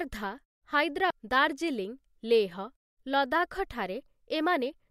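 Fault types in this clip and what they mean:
Damaged data in a compressed stream: at 1.10 s a brief blip where corrupted bytes throw the decoder off sync, unlike a plain click, which carries no decoded garble.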